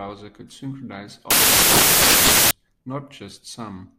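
At 1.31 s the speech suddenly gives way to loud, harsh broadband noise that runs until 2.51 s. That's samples built from the wrong bytes: the reader assembled each sample with its bytes misordered or offset, so the jittery low bits became the loud part.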